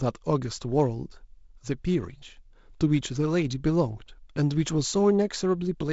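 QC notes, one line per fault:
Nothing stood out on listening to this speech, which has the expected sound of G.722 wideband telephone coding with its top end stopping near 7.7 kHz.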